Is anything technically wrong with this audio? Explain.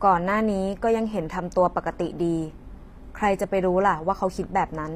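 Yes. Throughout the clip, the speech shows damage that most likely comes from HE-AAC compression, and the amount of artefacting fits a low bitrate of about 24 kbps. The encoder keeps only the lower spectrum and synthesises the treble by copying lower bands upward under a coarse envelope. That rebuilt top does not match the real harmonics, so s sounds come out gritty, metallic and lispy. Nothing is present above 15.5 kHz.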